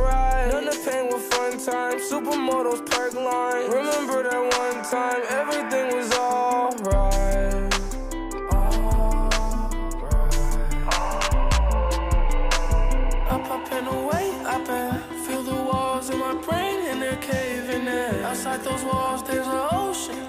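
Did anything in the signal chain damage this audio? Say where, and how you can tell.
No, nothing in the chain audibly damaged this audio.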